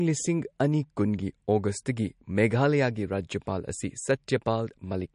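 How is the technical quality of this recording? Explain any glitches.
The recording has plainly audible lossy-coding damage throughout. Across the whole speech clip, the treble stops sharply at about 10.6 kHz, and the sound has a watery, swirling quality, likely MP3 compression at a low bitrate, consistent with roughly 40 kbps. Short of bits, the encoder discards the top band and drops weaker frequency lines that flicker in and out between frames, smearing consonant attacks and giving sibilants a metallic edge.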